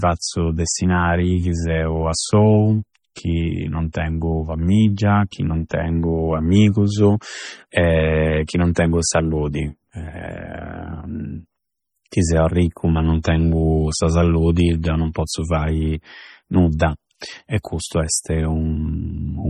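Throughout, the speech sounds watery and swirly, with the treble cut off and faint detail flickering in and out between frames. This points to heavy MP3 compression, likely at a bitrate around 32 kbps, where the encoder drops weak frequency lines and the top end to save bits.

Pre-echo appears as a brief hiss just ahead of sharp onsets, softening each attack. It occurs at 3.93 s after "chi non", 8.47 to 8.49 s, 8.75 s, 13.23 to 13.25 s after "seu arricchu ma non", and 16.79 s. Each smear lasts 14 to 22 ms, because the codec spreads noise meant for the loud attack across the quiet moment before it.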